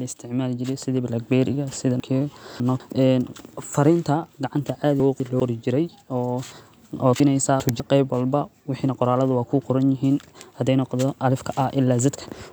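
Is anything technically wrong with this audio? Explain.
Yes. The speech has chunks out of order in three places: 2.0 to 2.8 s, 5.0 to 5.4 s (between "gacanta caadi" and "qor jirey"), and 7.2 to 7.8 s (just before "qeyb walba"). In each, a 200 ms block of audio plays late, arriving three, one and two blocks behind its proper place. Each displaced block creates three abrupt joins, so every spot sounds like a brief jumbled stutter. Unlike a dropout or a repeated chunk, nothing is missing and nothing is doubled. The same speech is simply heard in the wrong order.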